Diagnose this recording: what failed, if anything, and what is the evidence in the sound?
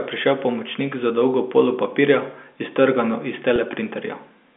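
Packet loss with pitch repetition at 3.56 to 3.58 s, just after "polo papirja iztrgano iz", in the network stage. About 20 ms went missing, which fits one lost packet. The receiver repeated the last pitch period across the gap, producing a brief held, buzzy note on the 200 Hz to 3.5 kHz G.711 line.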